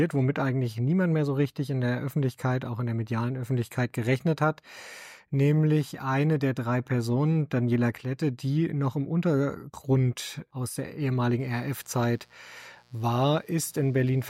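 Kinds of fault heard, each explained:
Mains buzz: from about 11.39 s until the end of the clip, a steady, raspy buzz sits under the sound, roughly 35 dB below it. It comes from the 60 Hz mains supply, and the noise leaks in as sharp switching spikes twice per cycle, through something like a dimmer, a rectifier or a missing shield. Those spikes give a dense ladder of 60 Hz harmonics reaching into the kilohertz range. That rasp is what separates it from a plain hum, which would be a smooth, low tone made mostly of the fundamental.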